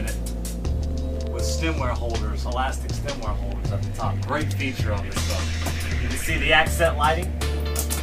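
At 3.85 to 3.87 s a repeated buffer: new audio arrived late, so the same piece, which fits a 10 ms buffer, played twice more with hard joins, heard as a brief buzzy click. Unlike a dropout, no silence or missing sound occurs.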